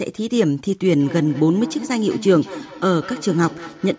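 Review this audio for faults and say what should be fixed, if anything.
A feedback echo between two devices runs from 1.0 s to the end of the clip. A second device in the room replays the call audio, and this microphone picks it up again. Its echo canceller only removes its own playback, so each phrase returns roughly every fifth of a second, thinner and more ringing, peaking at about 14 dB below the direct speech. The call microphone processing's band limit, with nothing above 8 kHz, is normal and not a fault. To prevent it, mute the microphone or speaker of the second device in the room, or use headphones.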